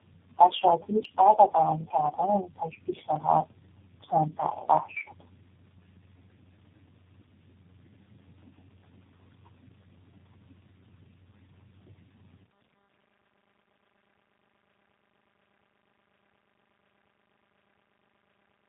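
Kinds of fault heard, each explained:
Tandem speech coding, throughout: four speech codecs in a row each re-encode the previous one's decoded output, stacking their errors. The speech sounds rough, muffled and warbly, with nothing above 3.8 kHz, which fits a chain ending in G.729A.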